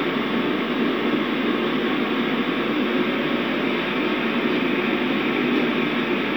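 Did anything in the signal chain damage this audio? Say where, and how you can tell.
No, nothing along the chain audibly damaged these sounds, so there's no stage to point to.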